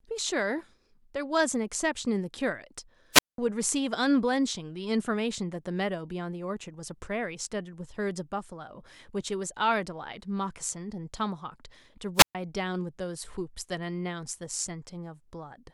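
A speech recording with two wireless microphone squelch dropouts, at 3.12 to 3.38 s and 12.15 to 12.35 s. Each brings a brief burst of hiss, then silence lasting 197 ms and 127 ms. The radio signal faded, so the receiver's squelch muted it.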